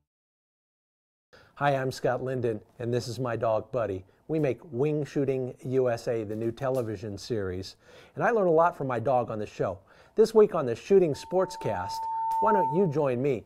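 At 11.14 s a loudspeaker feedback squeal begins and runs to 13.08 s. A microphone is hearing the loudspeaker it drives. At one frequency the loop gain passed one, so that frequency kept feeding itself. Here it is a single tone near 897 Hz. It swells over roughly one and a half seconds. It ends up around 5 dB louder than the surrounding sound. It then continues as a squeal until it stops.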